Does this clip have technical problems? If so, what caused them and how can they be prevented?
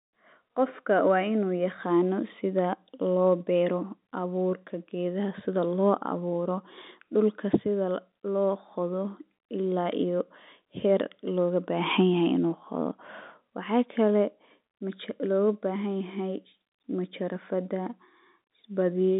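No, there are no technical problems to prevent in this speech clip. It carries the narrow band of G.711 telephone coding, roughly 200 Hz to 3.7 kHz with nothing above 4 kHz, which is the expected sound of a normal phone line.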